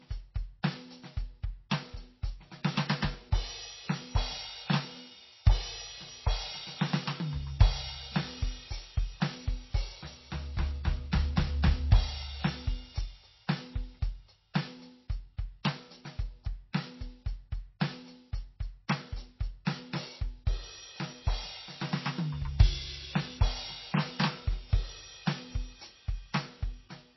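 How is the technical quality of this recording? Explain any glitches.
The recording is plainly degraded throughout, and two attacks are smeared by a short smear of noise before they hit.

The whole piece sounds dull and watery, with nothing audible above about 5.8 kHz and a swirling, unstable texture where quieter detail flickers in and out. This points to MP3 compression, likely at a very low rate around 24 kbps. Short of bits, the encoder cuts the treble at a fixed point and drops weak frequency components, which come and go between frames and create the swirl.

At 14.54 s and again at 19.65 s, a brief hiss arrives just ahead of a sharp attack, lasting about 14 ms and 18 ms respectively, and the hits themselves sound softened. This is pre-echo. The codec spreads its quantisation noise across an entire block, so when a strong onset lands late in that block, noise sized for the loud part also fills the quiet moment before it.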